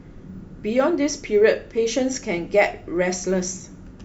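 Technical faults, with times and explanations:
Throughout: resampler restarted on every block. Each 20 ms block was resampled alone, leaving small edge errors. These form a 50 Hz buzz under the speech.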